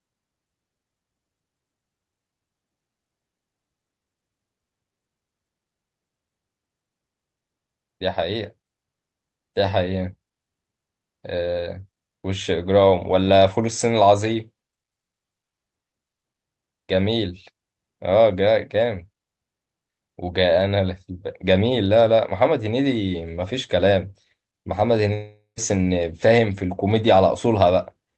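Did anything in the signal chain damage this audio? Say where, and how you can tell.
Yes. At 25.13 to 25.59 s, sound smears into a fading buzz, then goes silent. Likely a long network dropout, with the receiver concealing the gap.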